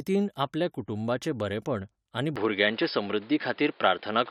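At 2.36 s, right after "आपल्या कुटुंबाचे बरेपण आनी", the speech abruptly turns duller and boxier through to the end, with nothing above 5.1 kHz, a modest level shift, a faint new noise floor and no gap. The likely cause is an input switched to a poorer device with narrower bandwidth.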